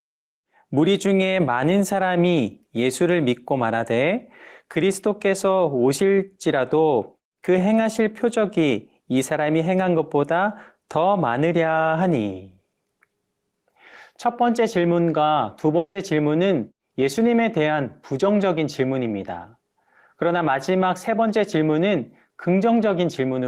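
At 15.77 s the speech breaks into a fading buzz for about 180 ms, then near-silence until 15.97 s; likely a long network dropout, with that chunk lost.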